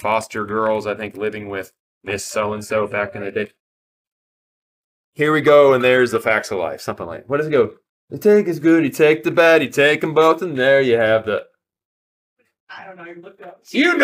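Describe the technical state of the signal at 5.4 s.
At 5.4 s the signal is intact, with no dropout, distortion or other audible fault at that moment.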